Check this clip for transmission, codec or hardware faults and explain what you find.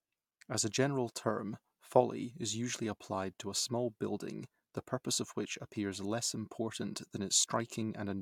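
Nothing stood out on listening to the speech here.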